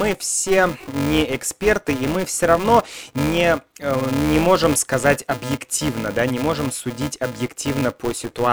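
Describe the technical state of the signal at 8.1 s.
At 8.1 s the filter restarted on every block is still present, as throughout the speech: each block, which fits a 128-sample size, starts from silence, leaving a 375 Hz buzz that tracks the level.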